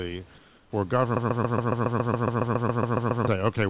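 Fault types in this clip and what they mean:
Comfort noise in place of the background: The sending side likely stopped transmitting during a pause its voice detector judged silent, so the receiver filled the gap with synthetic noise. From 0.38 to 0.72 s, about 340 ms, the real room background, which sits about 31 dB below the loud passages, is replaced by a smoother noise about 3 dB quieter, so the background briefly changes texture and drops in level before normal sound resumes.
Broken-record loop: A stall in the player, encoder or stream likely left it resending the last fragment it held instead of new audio. From 1.17 to 3.28 s a piece about 0.14 s long repeats back to back 15 times, giving a rapid, mechanical stutter of identical sound. Everything that should have played during those two seconds is missing, and the call path's 4 kHz upper limit stays unchanged throughout the loop.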